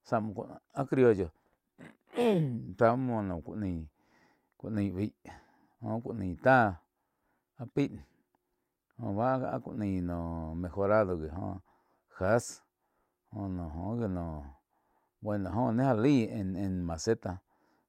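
Nothing stood out on listening to this speech recording.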